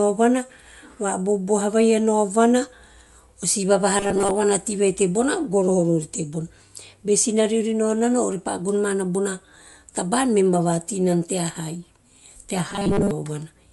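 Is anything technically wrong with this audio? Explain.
Yes. Throughout the speech there's a coarse, grainy edge and nothing above about 11.5 kHz. That's likely Bluetooth LC3 compression: at this rate the codec strips much of the upper spectrum and fills it with noise, working in 10 ms frames, and the damage is plainly audible.

Twice, from 3.98 to 4.31 s and from 12.69 to 13.11 s, the voice turns into a rigid metallic buzz at 200 Hz, robotic sound from repeated short buffers. Most of the audio there is a replayed 5 ms chunk, likely from starved delivery.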